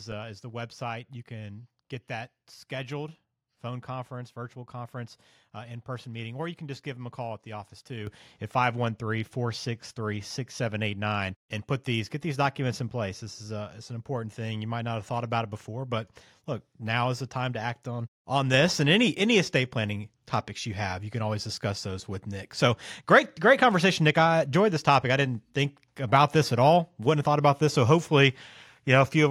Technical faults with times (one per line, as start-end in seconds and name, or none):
8.07 microphone volume stepped up
18.54 microphone volume stepped up